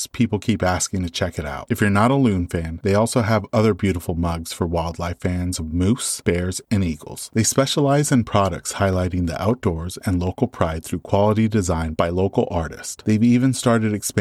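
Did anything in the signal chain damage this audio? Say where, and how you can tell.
Yes. Periodic USB or driver dropouts occur from 8.80 to 10.91 s, after "specialize in products". Regular ticks every 64 ms mark tiny skipped slivers of audio.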